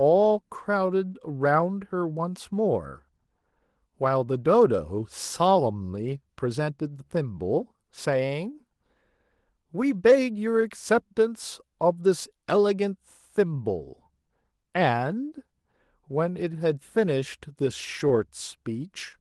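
From start to finish the speech carries clock drift between sender and receiver, with the sending side's clock running about 3 percent slow. Because the receiver consumes samples faster than they arrive, its jitter buffer keeps draining, and the playback has to keep stretching the audio to avoid running dry. Unlike a one-off network stall, this pressure never lets up. The imbalance is constant, and its marks are spread across the whole clip rather than bunched around a single gap.

The visible result is repeated timing corrections from 0.21 s to 18.8 s. The receiver keeps inserting small repeated pieces, all in the same lengthening direction, and adds roughly half a second in total. Playback runs at about 98 percent speed. Each insertion is tiny and irregularly spaced, so it comes across as a faint hiccup or a slightly uneven pace rather than the clear dropout of packet loss. All of this passes through the Opus call path at 24 kbps, whose audio extends only to 12 kHz.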